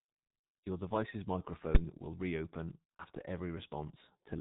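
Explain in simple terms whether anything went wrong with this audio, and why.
Throughout the recording, the speech passes through the G.723.1 codec, an early internet-telephony coder that squeezes speech into very little data. It cuts everything above 4 kHz and tracks the voice only in coarse 30 ms steps, so the speech comes out muffled and hoarse, and consonants smear together. The damage here is heavy, so that dull, rough quality never lets up.

At about 1.75 s, just before "will reopen", there is a single sharp bang. This is a case of invalid numbers at full scale: a calculation broke down and the output was forced to its loudest possible value for a very short block, around 11 ms, which fits a 512-sample buffer. The block is so short that it is heard as one click or bang rather than a pop at each end.

From 2.97 to 3.04 s, just after "will reopen", the sound is briefly stretched and fades, then recovers. 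This is VoIP packet loss concealed by the speech codec. A piece of the stream went missing, which points to one lost 30 ms frame, and the decoder filled the hole by stretching the last sound it had while fading it down. Because each frame builds on the previous one, the voice stays weak or distorted for a moment after the data returns.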